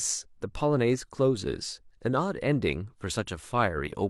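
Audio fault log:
No fault is heard in this speech clip.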